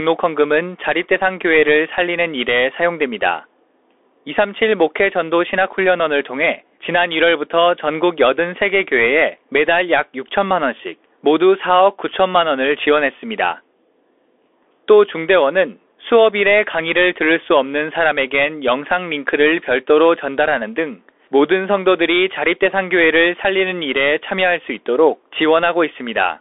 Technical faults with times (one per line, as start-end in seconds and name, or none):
0.00-26.40 Bluetooth CVSD headset codec